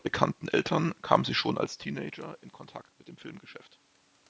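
No technical faults are audible anywhere in this speech.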